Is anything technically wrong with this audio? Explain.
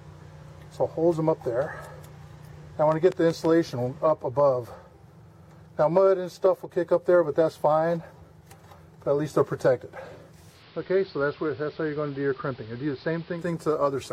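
Yes, there are two faults. From 2.92 to 3.46 s there is a train of clicks: about four uneven pops, around 5.6 per second, poking about 5 dB above the sound. Likely cause: nearby interference or a faulty connection.

From 10.48 to 13.49 s there is digital radio blending to analogue. The receiver cross-fades over 160 ms to the AM broadcast. Level drops about 4 dB, and faint hiss appears.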